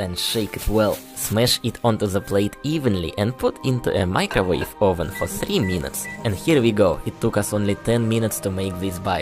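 Overlapping chunks occur at 1.48 s, 3.99 s and 6.51 s. Each 2.5-second chunk begins 12 ms before the previous one finishes, so that sliver of sound plays twice at every join. The result is a brief click or stutter repeating at 2.5-second intervals.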